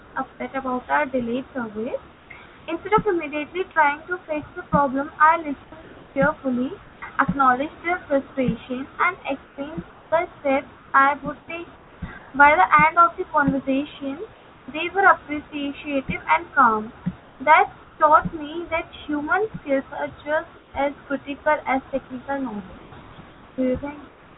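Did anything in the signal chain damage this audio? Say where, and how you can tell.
Yes. Comfort noise in place of the background appears in the speech pauses at 0.0–0.4, 2.12–2.68 (after "about our delayed service"), 5.64–7.02 (just before "acknowledged their frustration and"), 9.44–12.34 (right after those words), 14.32–14.68, 17.2–18.0, 20.58–20.74 and 22.78 to the end. This is likely call-processing discontinuous transmission: the sender stops sending audio when there is no speech, and the receiver plays a steady, featureless substitute for the room noise. That substitute is about 3 dB quieter at 14.32 and about 5 dB quieter at 20.58.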